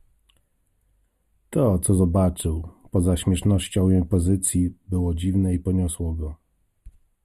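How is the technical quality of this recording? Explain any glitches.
The recording has a comb-filtering fault across the whole speech clip.

Channel delay (comb filtering) runs from start to finish. One channel arrives a fraction of a millisecond behind the other, roughly 0.1 ms, which points to a delay of a few samples. When the two are summed to mono, content common to both cancels at evenly spaced frequencies, starting near 5 kHz. That fixed notch thins the upper presence and sibilance region, giving the speech a hollow, dulled, phasey quality.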